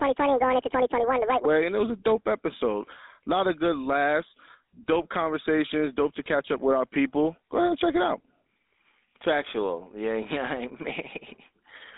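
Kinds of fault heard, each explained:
GSM full-rate codec: The whole clip has passed through the GSM full-rate speech codec, which rebuilds the voice from a vocal-tract filter driven by a coarse, regularly spaced pulse excitation. That gives the speech a plainly audible buzzy, gravelly roughness, and the line is confined to roughly 250 Hz to 3.7 kHz, with nothing above 3.8 kHz. On a spectrogram the energy stops at a hard ceiling near 3.8 kHz and the low end thins below 250 Hz. The bitrate points to 13 kbps.
Section at the wrong speed: From the start to 1.45 s the speech runs 1.81 times too fast, so pitch and tempo rise together and the voice sounds high and hurried, about ten semitones up, before snapping back to normal. The likely cause is that this stretch was played against the wrong clock. On a spectrogram the harmonics and formants in that opening section sit much higher and are more widely spaced, and on the waveform the syllables are visibly compressed in time.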